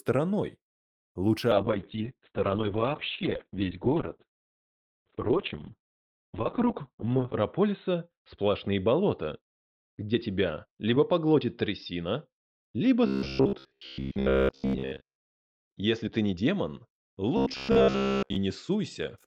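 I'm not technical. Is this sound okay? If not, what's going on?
No. From about 1.5 s to the end, there's a call bitrate drop: the connection judged it had less capacity, so the sound was squeezed into far less data. It loses its treble (nothing above roughly 4 kHz survives) and turns muffled and watery, at its worst for almost 6 seconds. Unlike a plain volume or microphone problem, the sound stays continuous and in time; it just sounds dull and coarse.

From 13.07 to 15.39 s and again from 17.37 to 18.36 s, you'll hear robotic sound from repeated short buffers: a rigid, metallic buzz with a steady low pitch near 67 Hz laid over everything. This is likely because fresh audio arrived too rarely, so the software kept replaying the last sliver, about 15 ms long, and skipped most of the real sound. What sets it apart from the muffling is that fixed mechanical drone that holds one pitch while the underlying sound still roughly follows along.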